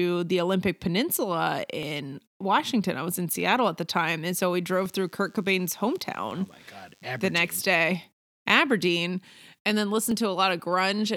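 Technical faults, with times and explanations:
1.83, 3.91, 4.86 (just after "and so we"), 6.31 and 10.11 s, dropped samples: five single sharp clicks, each likely from a fraction of a millisecond of samples going missing, so the waveform leaps abruptly to a later value, too briefly to remove any sound.
4.68 to 7.98 s, DECT cordless phone buzz: starting just after "and so we", a nearby DECT handset or base sends radio bursts 100 times a second that the audio circuitry rectifies, adding a thin, steady 100 Hz buzz rich in harmonics, about 40 dB below the speech.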